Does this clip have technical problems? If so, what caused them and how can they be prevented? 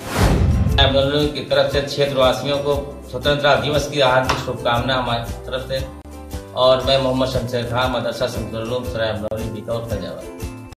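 Yes. Two gaps at a join of encoded pieces appear at 6.02 s and 9.28 s. Separately encoded segments were spliced without removing each encoder's start delay and final-frame padding, leaving dropouts of about 33 ms with smeared edges before the sound resumes. Trimming encoder delay and padding at every join, or encoding the material in one pass, prevents this.

From 6.72 s to 8.17 s a train of clicks ticks over the sound at a regular 13.2 per second, about twenty pulses of similar shape, roughly as loud as the sound itself. The likely cause is electrical interference or a faulty connection or power supply injecting repeated pulses. Shielding cables, separating the gear from noisy equipment, and checking the interface's drivers and connection should stop it.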